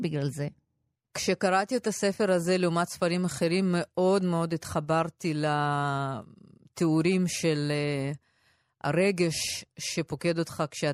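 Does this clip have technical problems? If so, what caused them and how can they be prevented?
No, the speech signal stays steady and intact throughout, with no technical faults to trace back to a cause or prevent.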